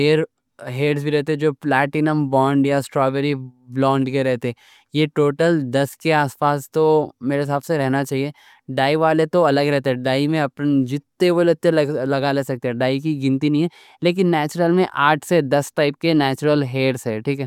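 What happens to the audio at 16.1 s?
At 16.1 s the speech carries on intact, with no dropout, glitch or other audible fault at that point.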